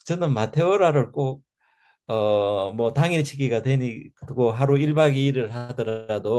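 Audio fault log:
5.57–5.71 s and 5.89–6.11 s, call audio freeze: packets were likely held up and the jitter buffer ran dry. The last sound is stretched into a fading buzz or hiss for about 116 ms, then 198 ms, and the audio resumes later with nothing lost.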